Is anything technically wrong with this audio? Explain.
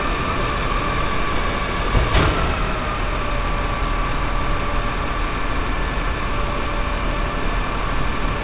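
No, nothing is technically wrong: the audio arrives through a call path whose G.711 A-law codec at 64 kbps leaves nothing above 4 kHz, and that narrow band is simply how such a call carries sound rather than a defect.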